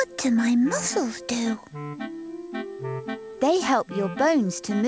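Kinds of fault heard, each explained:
No faults can be heard in this clip.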